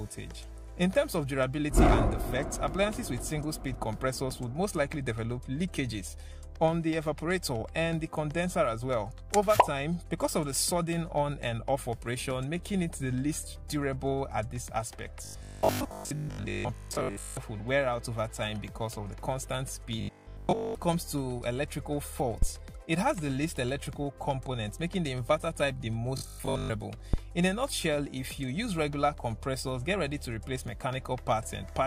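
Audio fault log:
15.25–17.37 s, 20.01–20.75 s and 26.18–26.72 s: robotic sound from repeated short buffers. A rigid 50 Hz buzz replaces the natural texture, most likely because a 20 ms chunk is looped while fresh audio fails to arrive. Most of the first and last spans repeat, and the middle span repeats entirely.
22.42–22.49 s and 27.14–27.19 s: phantom power thump. A short, deep low-frequency knock appears as a supply step passes through the input's coupling capacitors. It dies away quickly, in about 14 ms at the first thump and about 11 ms at the second.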